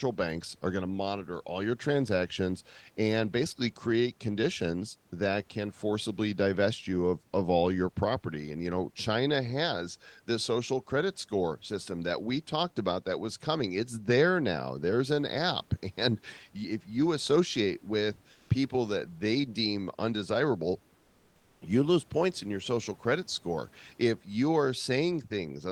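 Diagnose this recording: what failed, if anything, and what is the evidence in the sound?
Comfort noise replaces the room background at 18.31 to 18.49 s, after "if you associate with", and 20.95 to 21.61 s, after "that they deem undesirable". Steady, featureless fill, about 1 to 2 dB quieter, likely from codec discontinuous transmission synthesising noise during detected silence.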